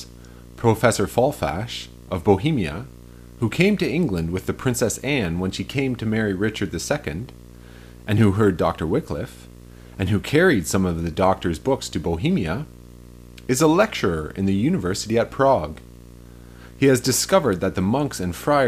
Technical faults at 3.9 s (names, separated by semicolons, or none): video or display buzz